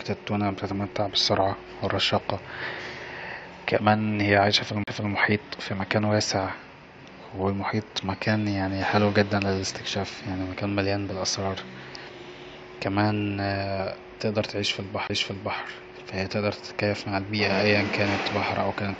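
A brief dropout breaks the speech at 4.84–4.87 s, just after "كمان هي" and before "مكان واسع", and again at 15.07–15.10 s, right before "ف هي تقدر تتكيف". Each gap lasts only a few tens of milliseconds before the audio resumes from a different point. These are CD skips: the laser jumped to another turn of the disc's spiral, so the player muted briefly and carried on from the wrong place.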